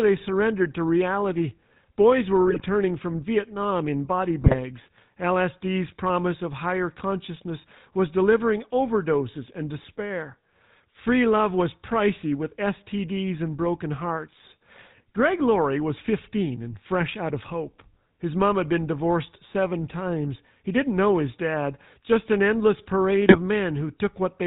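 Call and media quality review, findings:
GSM full-rate codec, whole clip: speech band-limited below 4 kHz with a buzzy, gravelly roughness, consistent with 13 kbps GSM full rate. The vocal-tract model is excited by sparse regular pulses. Unlike plain narrowband filtering, the grit comes from the excitation, not just lost treble.

GSM bit errors at 2.47–2.62 s, 4.41–4.55 s after "in body", and 23.26–23.38 s after "dad just an endless": brief squawks, pops and gargling. Corrupted filter, pitch and gain parameters reach the decoder. Packet loss would give gaps or repeats instead.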